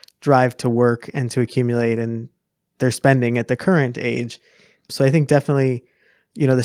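No technical faults turn up anywhere in this speech recording. There is no moment in it that needs a timestamp.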